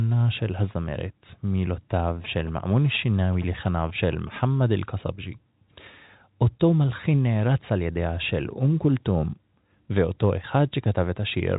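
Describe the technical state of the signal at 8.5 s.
At 8.5 s the speech is intact, with no fault: only the band-limited sound of G.711 telephone coding, with nothing above about 3.8 kHz.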